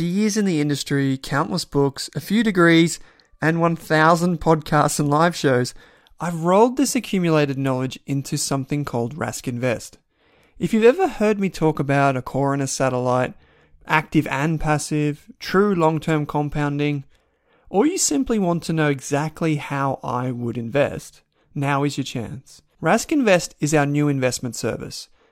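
No technical faults can be heard anywhere in this speech recording. There is nothing in the audio that needs a time marker or a repair.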